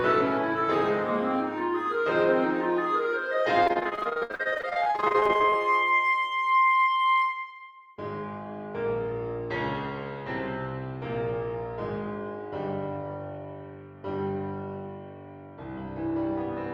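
From 3.63 to 5.58 s the sound turns choppy and robotic, a clear case of repeated packet loss. Dozens of short gaps, the longest about 61 ms, are patched by stretching the previous sound, so nearly half this stretch is concealed.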